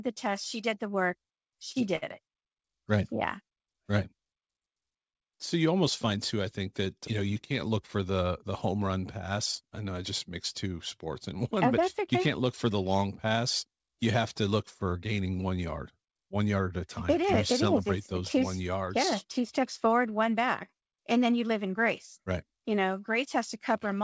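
A late packet left the jitter buffer empty twice in this speech clip, causing a short stall from a late packet: right after "did the work" the receiver held the last sound for 38 ms (1.72 to 1.79 s), then 63 ms (1.96 to 2.05 s), stretching it with a slight buzz or dip before resuming, carried over a G.722 call path with nothing above 8 kHz.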